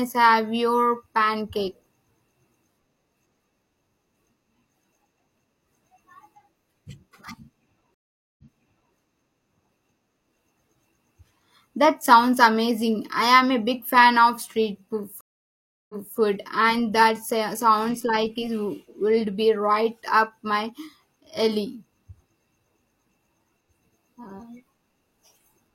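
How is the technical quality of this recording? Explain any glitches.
The recording has two stream reconnects. The first runs from 7.94 to 8.94 s. The second runs from 15.21 to 16.17 s, just before "and that". In each, the connection dropped and playback stopped. The player reconnected and started a new decoder mid-stream. The speech goes silent, for about 0.44 s and then 0.68 s. It then resumes slightly in the past, repeating 0.56 s and then 0.28 s of speech. The restart fades in.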